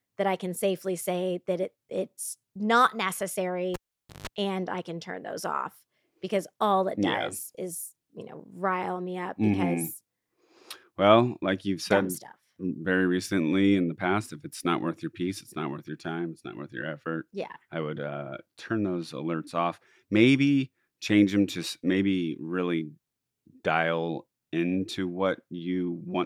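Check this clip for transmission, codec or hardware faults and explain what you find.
One hardware fault shows up in this speech clip: a cable pulled and plugged in, running from 3.74 to 4.27 s. A live connection is broken and remade, so the signal path opens and closes abruptly. A pop marks the disconnection, followed by roughly 480 ms of near silence. While the plug tip alone makes contact, a 154 ms burst of 50 Hz mains buzz leaks in, and a second pop lands as the full connection restores the sound.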